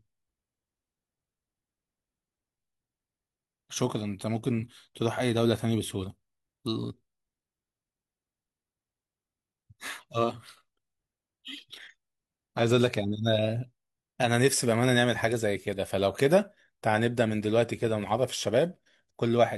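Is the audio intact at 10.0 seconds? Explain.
Yes, at 10.0 seconds the speech plays through intact, with no dropout, click, distortion or other fault at that point.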